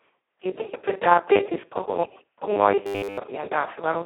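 From the first moment to the end, the speech carries heavy Speex codec damage, consistent with a very low Speex setting around 2 kbps. With so few bits for the excitation, the voice turns hoarse, noisy and near-vocoder in character. The line band runs from roughly 250 Hz to 3.5 kHz. On a spectrogram, energy stops sharply, with nothing above 3.5 kHz, and harmonics look smeared and grainy rather than cleanly striated.

From 2.87 s to 3.18 s the voice collapses into a rigid, metallic buzz at 100 Hz that only loosely tracks the speech. The likely cause is robotic sound from repeated short buffers: audio arrived too seldom, so a roughly 10 ms chunk was replayed over essentially the whole stretch while the real audio was skipped. The waveform shows an identical 10 ms shape repeating. The spectrogram shows evenly spaced, perfectly flat harmonic lines at multiples of 100 Hz.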